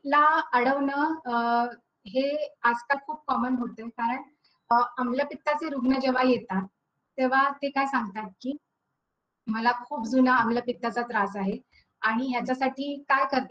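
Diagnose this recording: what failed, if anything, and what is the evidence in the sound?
Codec: compressed frames skipped at 2.93, 4.71 and 8.52 s. The audio jumps ahead about 50, 150 and 50 ms, leaving soft smeared blips rather than silent gaps or hard clicks.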